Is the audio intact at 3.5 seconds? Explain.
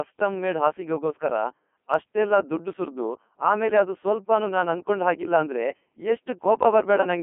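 No. The Codec 2 vocoder runs through the whole clip, including 3.5 s. It rebuilds speech from sine waves at what sounds like 3.2 kbit/s, leaving it buzzy, robotic and empty above 3.5 kHz.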